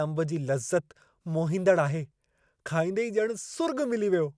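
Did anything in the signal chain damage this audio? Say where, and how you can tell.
No, nothing damaged this audio.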